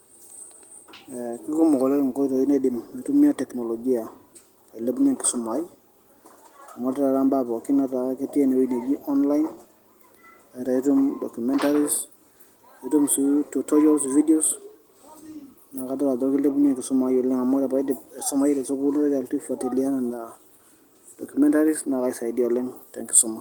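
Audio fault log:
Nothing to log here; the speech comes across as you'd expect from Opus voice coding in hybrid mode at 20 kbps, with only light codec coloring and sound reaching up to about 20.1 kHz.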